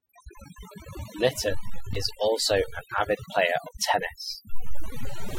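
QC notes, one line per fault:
Throughout: overdone noise removal. The background between phrases drops, broken up into small twinkling specks where isolated frequency bands briefly survive the gate. The quieter parts of the speech fall close to the tool's noise estimate and are pulled down along with the noise. Unlike low-bitrate codec swirl, the artefacts track the noise floor: they are densest in the pauses and around soft sounds, not spread evenly through loud passages.
1.95 s: gap between stream segments. A hole of about 5 ms of pure silence with abrupt edges cuts the sound. This is what happens when the time stamps of two adjacent segments do not meet and the player pads the gap with silence. Its position fits a boundary between one-second segments. Unlike a packet dropout, nothing is missing on either side. The sound stops and resumes exactly where it left off, just delayed by the inserted silence.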